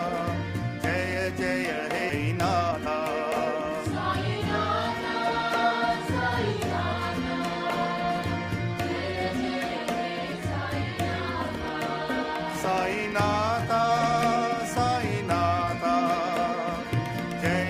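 A stretch of audio was discarded while later packets were already queued, producing a skip ahead at 2.09–2.11 s: roughly 0.7 s of sound is gone and playback lurches forward with no gap, the two sides butted almost directly together. An overfull jitter buffer then drained itself by cutting out short pitch-period-length pieces, a jitter buffer speed-up heard twice. From 2.65 to 2.88 s it runs at 167% speed, shedding around 150 ms and sounding sharply hurried at unchanged pitch. From 13.74 to 15.93 s a gentler 104% removes about 100 ms.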